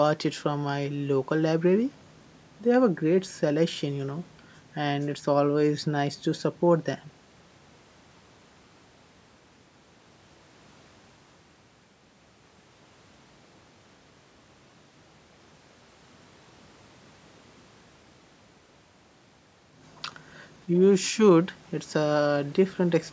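Speech with no technical faults to be heard. It has passed through a call's microphone processing, which leaves nothing above 8 kHz and rolls off the lowest bass, as that path normally does.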